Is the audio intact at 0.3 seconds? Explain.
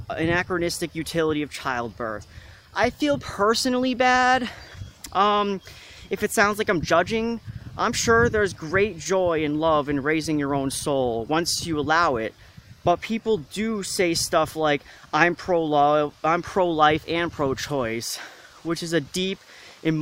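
Yes, the audio is intact at 0.3 seconds, with no dropout, click, distortion or other fault at that moment.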